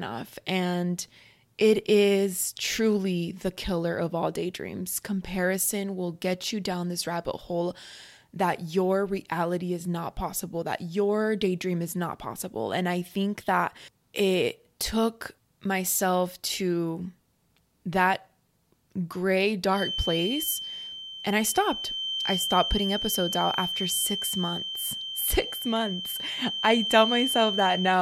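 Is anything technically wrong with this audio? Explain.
Yes. From 19.69 s to the end, a feedback whistle sits at 3.1 kHz, about 5 dB below the speech. Its likely cause is a loudspeaker-to-microphone loop held just short of instability. Unlike a runaway howl it never grows, and unlike a steady electrical tone it swells and fades slowly in level.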